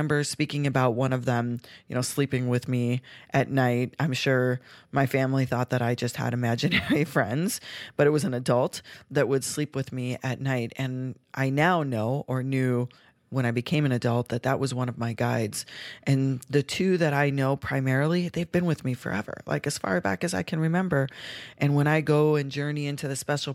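No technical faults can be heard anywhere in this speech recording.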